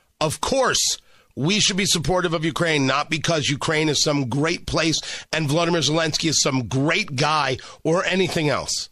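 Pre-echo at 6.70 s in this speech clip, just after "is some": a hiss about 10 dB up smears 12 ms ahead of an attack, which fits a 36 ms transform block with no switch to short blocks.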